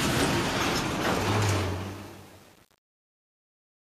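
Truncation distortion on a fade runs from 1.6 s to the end: the fade keeps too few bits, consistent with 7-bit resolution, without dither, so the quiet tail turns stepped and gritty.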